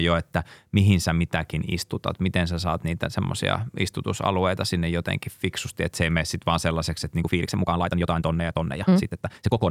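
At 7.19 s, just after "sitten vaan sellaiseksi että", processing that likely squeezed the remaining audio to fit a shorter length turns the last stretch into a time-stretched section running to the end at about 9.70 s. It plays back 1.59 times faster while holding pitch, which it does by dropping short slices of sound. The pace jumps abruptly, and the speech turns rushed with no change in pitch.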